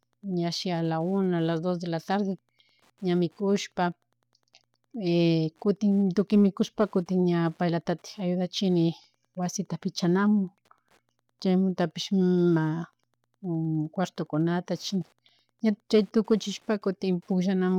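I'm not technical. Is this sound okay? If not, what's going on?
No. A nearby Wi-Fi radio is leaking into the audio circuit, a fault called Wi-Fi interference. The circuit picks up the radio's regular signal, sent about every tenth of a second, so a faint, steady ticking runs quietly beneath the speech throughout.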